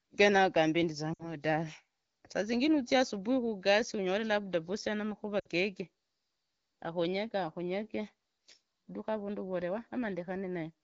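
Lost AMR speech frames at 1.13–1.36 s and 5.39–5.47 s: the decoder patches 60 ms each time by repeating earlier parameters at fading gain, heard as a quick drop to near silence.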